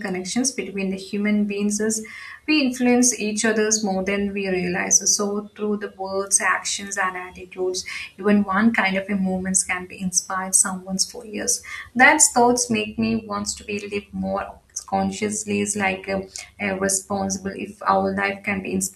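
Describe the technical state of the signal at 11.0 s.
At 11.0 s the speech signal is intact, with no audible fault at that moment.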